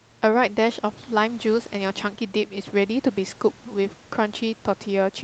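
No technical faults are audible anywhere in the speech.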